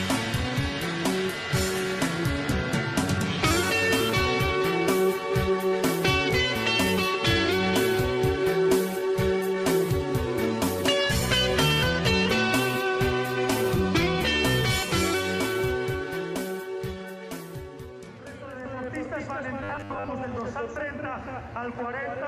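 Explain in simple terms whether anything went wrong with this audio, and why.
Robotic sound from repeated short buffers appears from 19.63 to 20.09 s. Here the sound turns into a stiff, metallic buzz at a fixed 100 Hz while still loosely tracking what it should be. The likely cause is fresh audio arriving too slowly, so the playback filled the gaps by looping a tiny piece, about 10 ms long, over and over. Most of that stretch is these repeats, and the real audio underneath was skipped.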